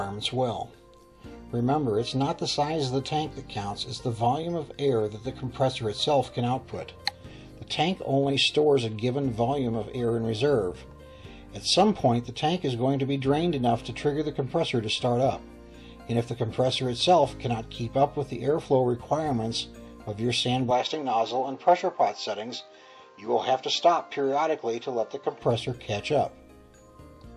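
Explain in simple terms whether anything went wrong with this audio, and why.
From 20.71 to 25.42 seconds the sound abruptly turns duller and narrower, then opens up again when that stretch ends. The top of the sound is missing there, with nothing above about 7.6 kHz, and a faint new background noise appears. There is no gap at either switch point and the loudness stays the same. This is an input switched to a poorer device. Most likely the recording briefly picked up a different, lower-quality microphone, which brought its own limited range and noise.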